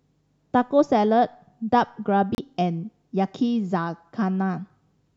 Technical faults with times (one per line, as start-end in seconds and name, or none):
2.35-2.38 Bluetooth stall